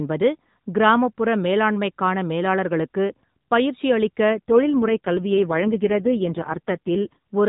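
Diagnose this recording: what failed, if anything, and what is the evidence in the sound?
AMR rate drop, 4.30 to 7.17 s: speech turns rougher and more synthetic without gaps, fitting a network-forced codec switch from 12.2 to 4.75 kbps.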